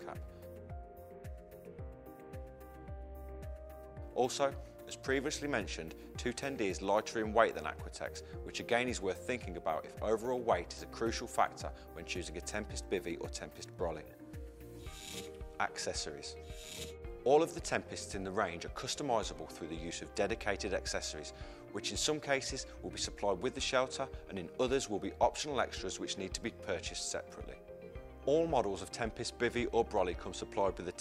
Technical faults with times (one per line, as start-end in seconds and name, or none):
none